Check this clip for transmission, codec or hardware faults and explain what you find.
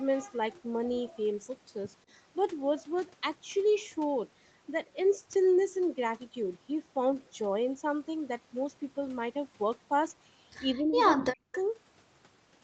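Two kinds of fault stand out, both tied to echo control on the loudspeaker side of a call; the audio stops at about 8 kHz, as expected for a wideband call path.

Echo leak at 1.07–1.23 s and 11.52–11.58 s: a faint delayed copy of the speech returns about 196 ms late, roughly 30 dB down at first and about 20 dB down later. The likely cause is an echo canceller letting loudspeaker pickup slip through.

Speech suppressed in double talk at 10.75–10.98 s and 11.15–11.54 s: the speech dips by about 20 dB, then by as much as 40 dB. The echo canceller likely confused the local talker with echo while both sides spoke.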